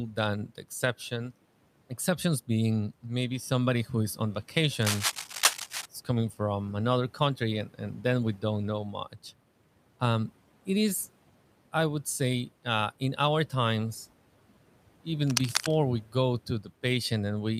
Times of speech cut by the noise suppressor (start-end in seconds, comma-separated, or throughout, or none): 16.03-16.15